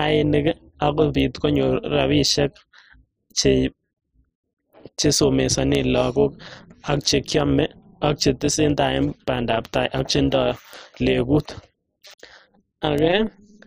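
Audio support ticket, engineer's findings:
Metallic buzz over the speech for the whole clip, level pulsing around 200 Hz at a depth of about 11 dB. Overlap-add ripple: frames recombined with an overlap that doesn't sum to constant gain. Pulse rate points to a short hop, roughly 5 ms.

Four isolated sharp ticks at 1.20, 5.75, 10.73 and 12.98 s, broadband and unrelated to the speech. Bit error spikes: a flipped bit in memory or on a digital link, one sample each, three consecutive samples at 5.75 s.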